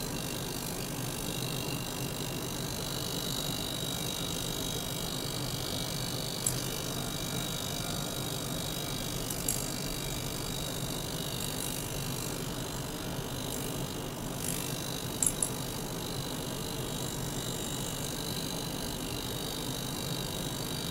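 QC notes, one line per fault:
No audible faults were found in this clip.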